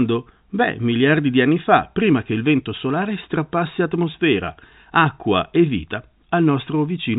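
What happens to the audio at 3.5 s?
Nothing goes wrong at 3.5 s: the speech carries on intact through that moment, still limited to the telephone band that G.711 coding imposes, with nothing above about 3.8 kHz.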